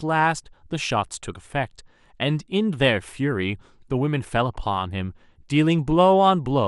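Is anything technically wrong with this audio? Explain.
Yes. Throughout the speech there is plainly audible damage whose likely cause is MP2 compression, with a character that fits a low rate of around 80 kbps. MPEG Layer II divides the spectrum into 32 equal sub-bands and shares out a fixed bit budget, so at this rate the upper bands are dropped and the rest are coarsely quantised. The voice sounds dull, with a gurgling, granular roughness. A spectrogram would show a ragged ceiling and blocky bands flickering on and off.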